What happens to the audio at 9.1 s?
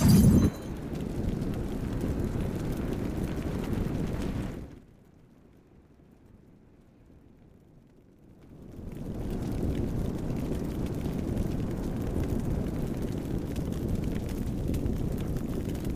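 At 9.1 s the sound is near the end of a stretch of zipper noise running from 8.17 to 9.33 s. A level change of roughly 25 dB is being applied in bare 1 dB jumps, about twenty a second, with no smoothing between them. Each jump puts a small discontinuity into the waveform, so instead of a clean fade the sound carries a fast, gritty ticking, a zipping texture riding on top while the level moves.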